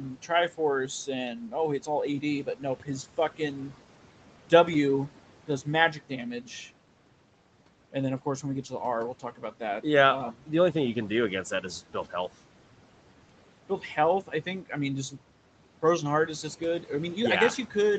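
Noise suppressor artifacts run throughout. The background is pulled down by about 12 dB between phrases and rises under speech, which shows as a flickering speckled floor on a spectrogram. From 2.44 to 2.88 s, and again from 9.2 to 9.61 s, there is speech cut by the noise suppressor. The suppressor mistook quiet speech for noise and dipped it by about 11 dB, then about 7 dB, across roughly a tenth of a second or more. These sounds come out swallowed, and they appear as sudden notches in the waveform envelope.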